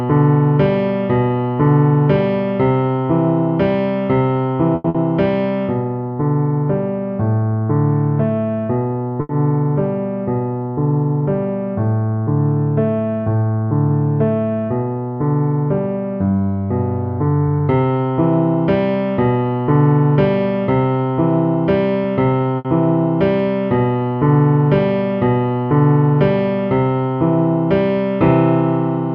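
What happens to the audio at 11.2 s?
Nothing goes wrong at 11.2 s; the audio runs through that moment intact, with no dropout, click or other fault.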